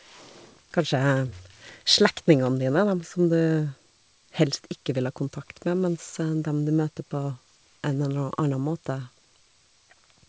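Nothing stood out on listening to this speech, which comes through a WebRTC call path with G.722 coding and so carries nothing above 8 kHz.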